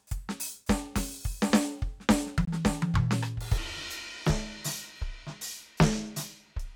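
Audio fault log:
2.45 to 2.48 s, Bluetooth dropout: the music cuts to silence for about 20 ms and resumes as if it had kept playing, likely one lost wireless packet.
3.58 s to end, section at the wrong speed: playback runs at 0.744 times speed, so the music drags and drops roughly five semitones, likely a clock mismatch.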